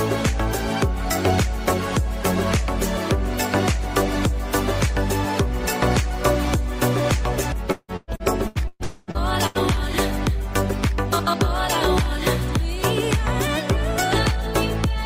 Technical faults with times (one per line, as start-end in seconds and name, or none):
7.71-9.58 repeated packet loss (robotic sound)
8.84-9.10 long network dropout